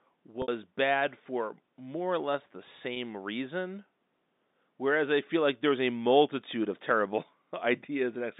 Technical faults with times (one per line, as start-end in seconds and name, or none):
0.42-0.48 packet loss with pitch repetition
2.94-2.96 packet loss with pitch repetition